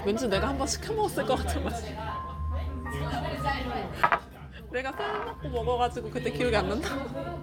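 Listening to this recording of sounds, nothing stood out as a technical problem.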